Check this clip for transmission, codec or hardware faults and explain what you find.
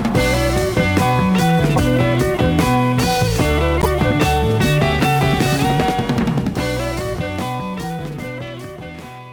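Two short bursts of corrupt frame decoded. A brief burst at 1.76–1.78 s and a longer burst at 3.81–3.89 s, with a stronger error. Flipped bits in compressed frames were decoded anyway, so misread gains and codes spread energy into wrong frequencies for one frame, then a run of roughly three.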